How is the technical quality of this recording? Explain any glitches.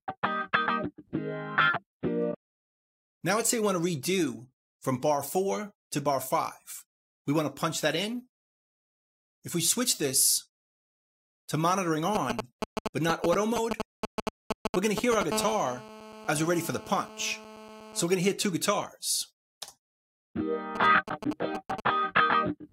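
Quality takes a hit from a nearby 2G phone, which breaks into the audio three times in the second half.

From 12.15 to 15.23 s, and again from 20.76 to 21.80 s, there are GSM signalling bursts: galloping dit-dit-dit ticks and short 217 Hz buzzes. They're roughly as loud as the sound in the first stretch and a bit quieter in the second. The phone is only sending brief bursts, and the audio circuit rectifies them.

From 15.32 to 18.01 s there's GSM phone buzz, a steady, raspy 217 Hz drone full of harmonics, about 13 dB below the sound. This is the phone's continuous in-call bursting being rectified in the same way.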